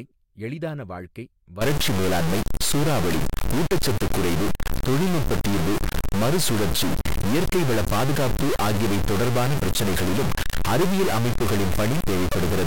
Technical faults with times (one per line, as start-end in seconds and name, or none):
1.61-12.67 stuck bit